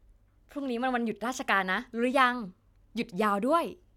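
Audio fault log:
No fault is heard in this speech.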